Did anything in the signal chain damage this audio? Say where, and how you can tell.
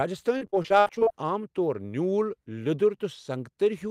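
Yes. The damage is on the network side: repeated packet loss (robotic sound) runs from 0.37 to 1.15 s of this speech clip. Over that span the audio keeps breaking into short holes, twelve of them, the longest about 59 ms. Each is bridged by stretching the preceding sound, so the passage turns choppy. Roughly a third of the stretch is concealment rather than real signal, with about 300 ms of audio lost in total.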